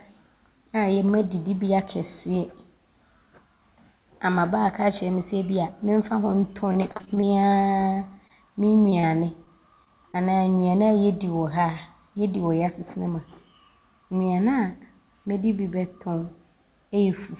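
Speech over a call link whose band stops at 4 kHz, consistent with a narrowband telephone codec such as G.711, shows repeated packet loss with a robotic sound from 6.68 to 8.32 s. Roughly fifteen dropouts of up to 27 ms, about 16% of that stretch, are patched by extending the previous sound, leaving choppy speech with pieces missing. On a spectrogram these patches appear as frequent smeared stretches where the previous sound is drawn out in time. Short concealed packet loss follows at 8.90, 9.00, 9.45, 9.84 and 10.12 s. Each roughly 20 ms hole is bridged and sounds like a brief smear or wobble, visible as a small stretched patch in the waveform.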